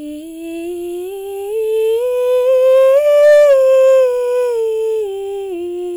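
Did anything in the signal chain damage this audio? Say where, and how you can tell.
Yes. From 2.73 s to 3.97 s the peaks of the music crackle. That is hard clipping. The signal was driven about 5 dB past what a converter or fixed-point sample format could hold, so each peak was sliced flat at the ceiling. Those squared-off tops add a spray of high harmonics that were never in the music, which is the crackle you hear, and it ends once the level drops back.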